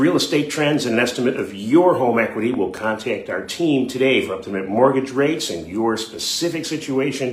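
A sudden voltage step, likely from a plug, switch or static discharge, entered the signal path at about 2.54 s, producing a loud pop: two sharp thumps in quick succession through 2.79 s, peaking roughly 5 dB above the sound, which continues underneath.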